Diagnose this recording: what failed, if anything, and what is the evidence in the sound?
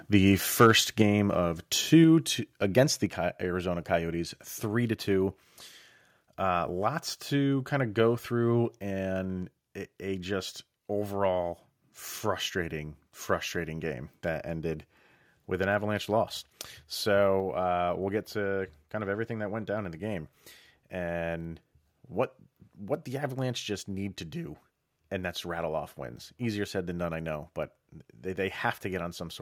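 Microphone overload, at the converter: the input level was likely set too high, so peaks near 0.6 to 0.71 s run about 3 dB past full scale, flattening a few percent of samples into harsh crackle.

Microphone volume stepped down, in call processing: automatic gain control likely cut the device input in single steps, with sudden level drops at 1.02 s (about 4 dB), 2.04 s and 3.06 s (about 3 dB), and 8.79 s and 17.4 s (about 2 dB).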